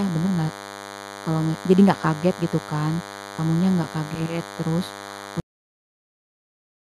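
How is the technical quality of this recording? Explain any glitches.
The recording has two clear technical problems: a constant buzz underneath the speech, and an ending that is chopped off abruptly.

Throughout the clip, a thin, steady buzz with a harsh, many-harmonic edge sits roughly 15 dB below the speech. This is DECT cordless phone buzz. A DECT handset or base station nearby transmits a short radio burst every 10 ms. The audio circuitry rectifies those bursts and turns them into a 100 Hz pulse train, which is why the buzz is rich in harmonics instead of being a smooth hum.

At 5.4 s the speech stops dead, mid-sound, and falls straight into digital silence with no natural decay. That silence lasts until the end of the file. This is a cut-off end. The final buffers of audio were never written or played out, so everything after that point is simply missing. It is not a fade or a pause in the speech.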